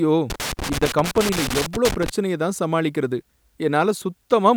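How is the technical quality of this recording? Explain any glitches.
The recording has one clear glitch: loose connector crackle from about 0.3 s to 2.10 s in the speech. For nearly two seconds there's a scratchy, irregular crackle riding on the signal. That's a worn or dirty contact somewhere in the cable chain flickering between connected and disconnected, so the audio keeps getting chopped up, and any DC sitting on the line turns those breaks into little pops. Then it settles down.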